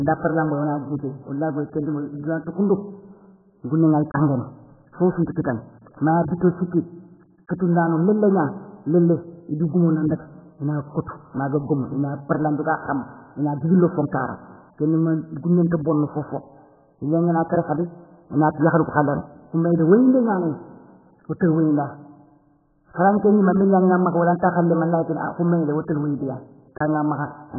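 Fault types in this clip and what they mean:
AAC compression: speech is dull, with nothing above 1.7 kHz, and heavily smeared and warbling, unlike a clean low-pass filter; this likely comes from very-low-bitrate AAC-LC coding, around 8 kbps.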